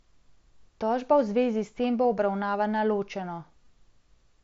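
At 2.04 s and again at 3.65 s the speech shows concealed Bluetooth headset packet loss: audio from the headset's mSBC link failed to arrive, and the phone patched each hole with a copy of the best-matching recent waveform. The first patch lasts 7.5 ms, which fits a single lost frame, and is nearly hidden. The second lasts 15 ms, consistent with two frames, and gives a brief buzzy smear. Unlike a plain dropout, neither event falls into silence.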